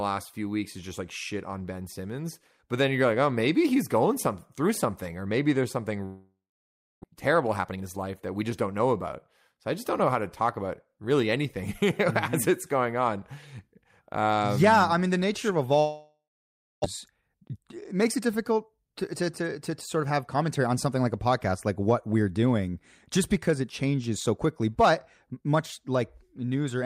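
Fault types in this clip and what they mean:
Long network dropout, 6.05 to 7.06 s and 15.79 to 16.86 s (the second right after "mean the nature of"): each time the sound smears into a fading buzz, then about 0.6 s of near silence, and speech resumes with roughly 0.6 s gone. This is likely a stretch of packets that never arrived, with the receiver filling the gap before giving up, and it leaves the stream running several tenths of a second late.
Jitter buffer speed-up, 7.28 to 9.67 s and 16.87 to 20.35 s, each ending just before "I just don't know" and "on something like a": after each gap, the late packets arrive together and pile up in the buffer. The receiver drains the backlog by cutting tiny pitch-period slices over and over. The speech runs about 14% and then 12% fast at unchanged pitch and sounds hurried, shedding roughly 0.3 s and then 0.4 s.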